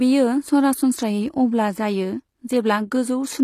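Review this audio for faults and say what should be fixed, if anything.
The speech has HE-AAC compression damage throughout. The s sounds are gritty and lispy, and the treble sounds synthetic. It likely comes from spectral band replication, which copies lower bands upward, at a low rate near 24 kbps. Nothing sounds above 15 kHz. Encode at a higher bitrate, or use plain AAC.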